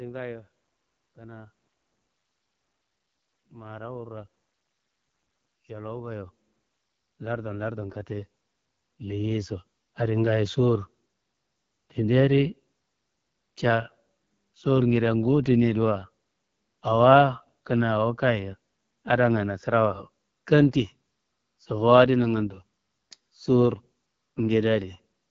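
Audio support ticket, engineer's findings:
AMR wideband (HD Voice) codec, whole clip. Speech sounds rough and raspy, and nothing comes through above about 7.4 kHz. It's a vocal tract model plus pulses below 6.4 kHz and noise fill above. The damage fits a low 8.85 kbit/s mode.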